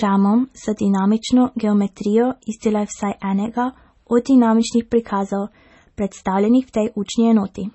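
Throughout the speech, the treble stops dead above 8 kHz and weak detail swirls in and out, likely from MP3 compression at a low bitrate. Its smeared, watery quality sets it apart from a simple low-pass filter.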